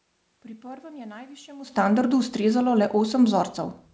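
No technical faults can be heard in the signal, which has the ordinary band-limit of a wideband call path, with nothing above 8 kHz, and carries the room's own background noise.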